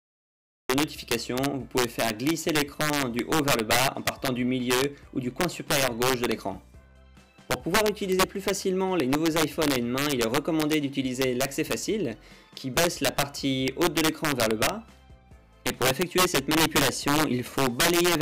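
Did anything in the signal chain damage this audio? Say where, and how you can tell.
Yes, the loud passages suffer integer overflow throughout, introduced at sample-format conversion. Gain about 8 dB too hot pushes roughly one or two percent of samples past full scale. They wrap to the opposite sign, producing harsh cracks far sharper than clipping's flattened, buzzy distortion.

A cut-off start at recording or storage: digital silence runs from 0 to 0.70 s. At 0.70 s the sound appears already in progress, with an abrupt step and no attack. A natural onset or a fade-in would build up gradually rather than jumping in mid-sound.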